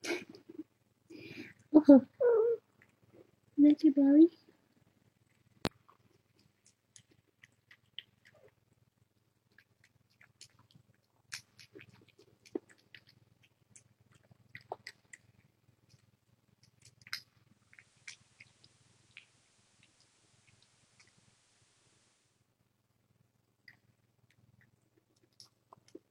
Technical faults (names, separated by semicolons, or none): loud pop; digital radio blending to analogue